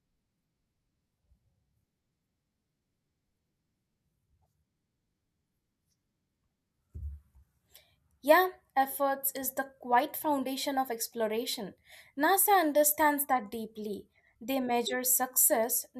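No technical faults are audible anywhere in the recording.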